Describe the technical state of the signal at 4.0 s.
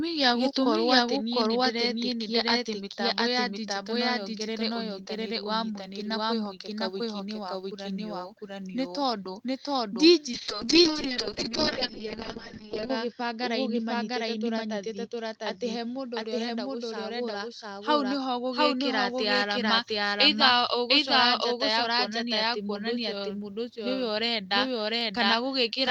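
Right around there, at 3.96 s, you get a click from dropped samples. A tiny sliver of the stream, well under a millisecond, goes missing, so the waveform jumps straight to a later value. It's too brief to lose any sound, just one sharp tick.

Under that, and through the whole clip, there's a doubled audio track: the same speech comes back roughly 0.7 s later at about equal level, dry and full-band with no room tail, likely from a second capture path or a misaligned edit.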